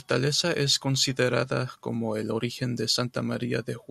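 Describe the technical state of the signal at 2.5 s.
At 2.5 s the speech signal is intact, with no dropout, distortion or other technical fault audible at that moment.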